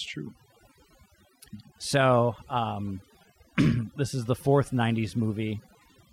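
A speech recording marked by overdone noise removal across its whole length: the background drops and breaks up into twinkling specks. A noise reduction stage set far too strong is cutting individual frequency bands whenever they approach the noise floor, taking quiet parts of the voice down with them.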